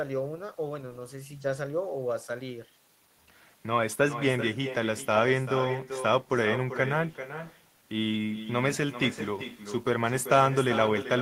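Speech runs through the whole clip shadowed by a second, weaker copy of itself, the classic sign of echo with no canceller. The far end is playing the call on a loudspeaker, its microphone catches it, and nothing subtracts it before it comes back. The copy sits about 11 dB below the direct speech and trails it by roughly 0.4 s, and it sounds thinner. That long, single delayed repeat separates it from room reverberation, which smears in continuously rather than arriving as a distinct late echo.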